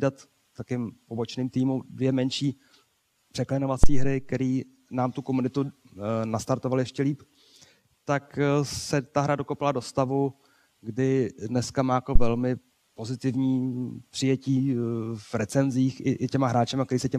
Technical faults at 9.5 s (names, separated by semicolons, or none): none